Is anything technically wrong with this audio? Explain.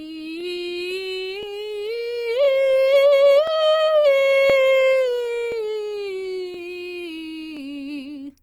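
Yes. This music has overlapping chunks, heard as a small stutter at 0.41, 1.43, 2.45, 3.47, 4.50, 5.52, 6.54 and 7.57 s. The audio was handled in 1-second chunks, each starting about 23 ms before the previous one ended, so that sliver replays at every join. The slightly longer than 1-second spacing follows from that replay. Unlike a dropout, nothing goes missing; the music briefly doubles back instead of going silent.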